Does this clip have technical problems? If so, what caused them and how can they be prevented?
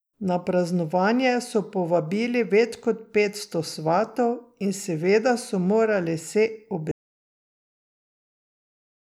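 Yes. An audio dropout to silence begins at 6.91 s and runs to the end of the clip at 9.10 s, so the last 2.2 s of speech is missing. The sound stops abruptly in mid-flow and is replaced by silence, with no room tone or noise floor underneath. The likely cause is that the input signal was lost, through a disconnected device, a failed link or an accidental mute, while the recorder kept writing silence. Secure the cables and wireless links, and watch the input meters throughout recording.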